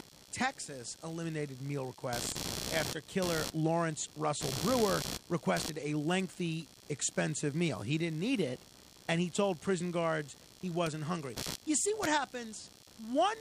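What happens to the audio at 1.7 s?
Computer activity noise is present at 1.7 s, as it is across the entire speech clip. Changing load on the processor, graphics card or mouse shifts the ground that the audio circuit shares with the computer, so that activity leaks into the recording. It comes through as a pulsing interference at around 70 pulses per second, roughly 10 dB below the speech, rising and falling with what the computer is doing rather than with the talking.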